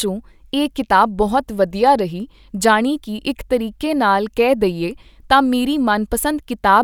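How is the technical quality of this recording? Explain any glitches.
No glitches to report; the recording shows no technical faults anywhere in the clip.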